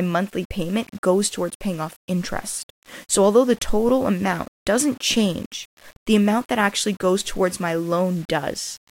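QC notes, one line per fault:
Throughout, low bit depth without dither: a grainy, rough distortion rides on the speech and shifts with it, growing coarser in quiet passages and decays. The likely cause is rounding to 7 bits with no dither, leaving signal-tracking error roughly 30 dB below the speech.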